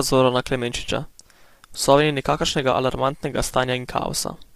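Low-delay AAC compression runs through the whole speech clip, likely from AAC-ELD coding at a rate consistent with about 32 kbps. At this low bitrate the coding is coarse, so the voice sounds rough and grainy, with noise filling between harmonics and a thinned, synthetic-sounding top band.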